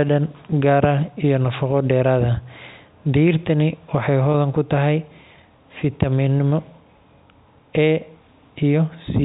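At 4.32 to 4.34 s there's a brief packet loss with pitch repetition: about 20 ms dropped out, which fits a single lost packet, and the receiver looped the last pitch cycle to cover it, so the speech briefly holds with a buzzy smear under the band-limited telephone sound of the G.711 coding.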